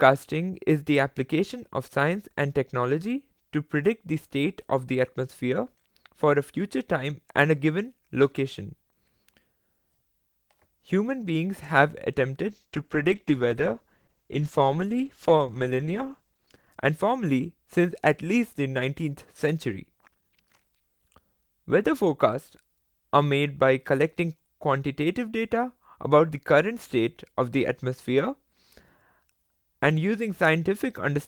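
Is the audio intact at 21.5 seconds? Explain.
Yes, the speech at 21.5 seconds is intact, with no audible dropout, distortion, glitch or other fault at that moment.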